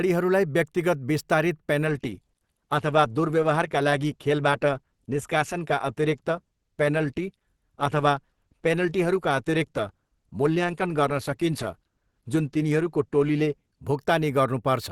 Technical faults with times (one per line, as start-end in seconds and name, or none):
1.85-13.85 adaptive stream at a lower bitrate